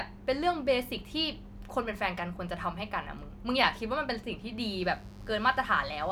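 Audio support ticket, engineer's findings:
Mains buzz from 4.78 s to end of clip (6.12 s). Steady raspy buzz under the speech, roughly 25 dB below it. 50 Hz mains. Probable source: dimmer, rectifier or unshielded cable coupling sharp switching spikes into the chain twice per mains cycle, with harmonics reaching several kHz. Unlike plain mains hum, a smooth low tone at 50 or 100 Hz, this one is bright and edgy, so a notch at the fundamental alone won't clear it.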